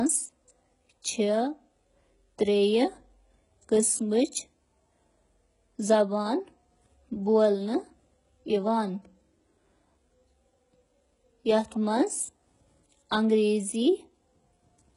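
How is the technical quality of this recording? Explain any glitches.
The technical quality is poor. The speech carries heavy codec damage throughout, and one brief attack is smeared.

Throughout the clip, the treble sounds synthetic and gritty, and nothing is present above 11.1 kHz. This is likely HE-AAC compression at a very low bitrate, around 12 kbps. The upper band is rebuilt from copied lower bands. Its harmonics don't align, so sibilants turn metallic.

At 4.32 s there is pre-echo. Quantisation noise spreads across the transform block, filling about 13 ms before a sharp onset. A short hiss leads the attack. The attack itself sounds softened rather than crisp.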